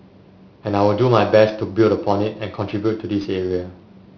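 A speech clip with aliasing throughout. The sample rate was cut without an anti-alias filter first, which fits a drop from 16 kHz to 11 kHz. Energy above 5.5 kHz has nowhere to go, so it folds back down into the band as false tones. Sibilants sound gritty and metallic. The folded content sits roughly 25 dB below the speech. The spectrum runs hard up to 5.5 kHz and stops.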